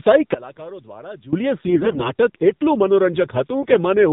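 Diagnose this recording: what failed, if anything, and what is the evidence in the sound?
Codec stage. The speech runs through the AMR narrowband mobile codec for the whole clip. Nothing above 4 kHz survives, and the speech sounds buzzy and synthetic. That damage fits a low AMR-NB mode, around 7.4 kbps, where few pulses drive the vocal-tract model.

Wiring or mix stage. From 0.34 to 1.33 s the speech drops by about 20 dB and turns faint. The centre largely cancels. The likely cause is one channel inverted, so the common content cancels when the two channels are summed to mono.

Network stage. From 1.68 to 2.11 s the speech turns hoarse, scratchy and gargly, though pitch and level roughly hold. A shorter, milder patch follows at 3.61 to 3.77 s. These are AMR bit errors. Flipped low-priority bits misplace pulses and skew gain and spectrum.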